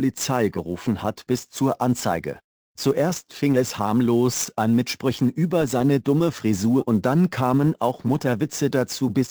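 From start to finish, the audio carries sample clock jitter. The converter's clock wanders, so each sample lands a little early or late. The timing error is large, around ten microseconds. Steep parts of the waveform suffer most, because a small time slip there means a big level mistake. The result is a gritty hiss riding on the sound, roughly 25 dB below it. It swells on loud, bright passages and disappears in the quiet gaps.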